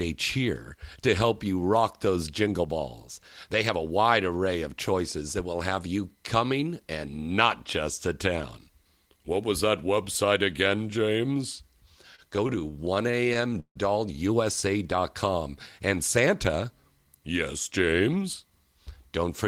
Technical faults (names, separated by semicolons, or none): repeated stalls (stutter); jitter buffer slow-down; jitter buffer speed-up